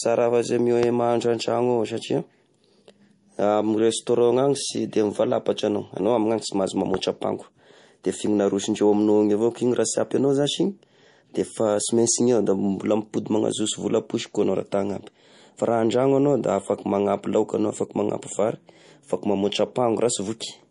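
Throughout, the speech carries MP3 compression: nothing above 10.6 kHz, with watery, swirling artefacts plainly audible, which fits a low bitrate near 40 kbps. A loud pop, likely a brief voltage pulse such as a switch or static discharge, lands from 0.83 to 0.85 s just after "afa sy", and a second from 6.94 to 6.96 s. Each is a single sharp click about 15 dB above the speech.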